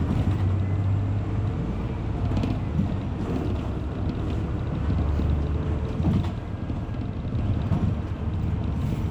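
No technical faults can be heard anywhere in the recording, and the signal holds steady throughout with nothing going wrong in its level, timing or continuity.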